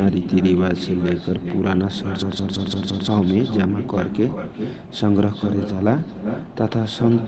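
From the start and all the way through, every phrase is trailed by a quieter, thinner copy of itself, arriving around 0.4 s later and about 8 dB below the direct speech. This is echo with no canceller. The far end played the call over a loudspeaker, its microphone picked that sound back up, and nothing subtracted it, so the speech returns after the network round trip as a distinct shadow.

From 2.22 s to 3.07 s the speech gives way to a rapid machine-gun stutter. One fragment of about 171 ms repeats exactly five times, at a rate of 5.86 Hz. This is a system hang loop. The computer or audio driver stalled while the sound hardware kept replaying the same ring buffer, whose length fits an 8192-sample buffer. Roughly a second of the real speech is lost and replaced by the repeating fragment.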